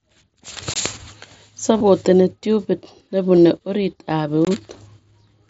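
A block of digital silence at 0.74 to 0.76 s cuts about 21 ms of speech out with no fade, leaving a short hole. This fits a 1024-sample output buffer that wasn't filled in time.

Concealed Bluetooth headset packet loss follows at 1.77 to 1.81 s. The receiver bridges 30 ms, which points to four lost frames, by repeating recent waveform, heard as a brief buzzy tone with a slight warble where real speech resumes.

A second concealed loss at 3.37 s, just before "orit ab", covers only 7.5 ms, a single lost frame patched almost invisibly.

Another block of digital silence at 4.45 to 4.47 s, right after "orit ab", repeats the same 21 ms hole.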